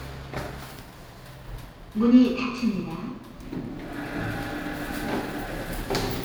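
Throughout, the sounds carry a rough, metallic edge that disappears in silence: periodic clock jitter, interference shaking the converter's clock at around 2 kHz and adding sidebands.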